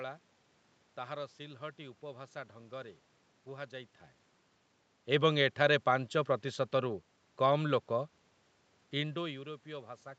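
No technical faults can be heard anywhere in the recording.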